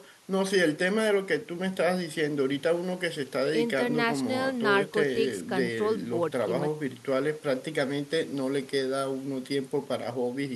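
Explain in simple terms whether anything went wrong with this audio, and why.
Nothing went wrong with this audio, because no fault can be heard anywhere in the recording.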